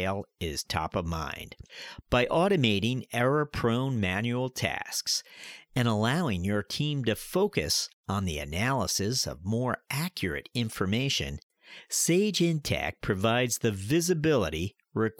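No technical fault can be heard anywhere in this speech recording, and the signal stays continuous and steady throughout.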